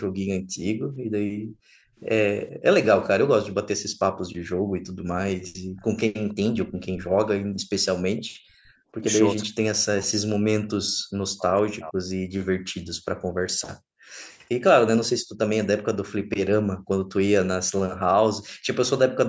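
From 0.1 to 2.64 s and again from 3.77 to 8.93 s, the echo canceller clamps the microphone while the far end's loudspeaker is playing. The result is background gated by the echo canceller: the room sound falls away by as much as about 40 dB, totalling around a second and a half in the first stretch and about two seconds in the second, then comes back each time the canceller releases.

Inside that second stretch, the canceller likely fails to fully remove the loudspeaker signal, and an echo leak sends part of it back. From 5.77 to 6.86 s, and briefly from 8.17 to 8.22 s, a faint copy of the speech trails the original by 465 ms. It sits roughly 20 to 25 dB below the main speech.

From 9.01 to 12.06 s, both ends seem to be talking together. The canceller likely mistakes the near talker for echo and pushes everything down, so this is speech suppressed in double talk. The voice drops by up to about 40 dB, with roughly three seconds affected in total.

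The gating returns from 12.94 to 14.27 s, 15.19 to 16.9 s, and 18.49 to 18.67 s. The background again falls by up to about 40 dB, in dips totalling about a second, then about 0.7 s, then a brief 0.15 s. Across all of this, the call microphone processing's band limit is audible as an absence of content above 8 kHz.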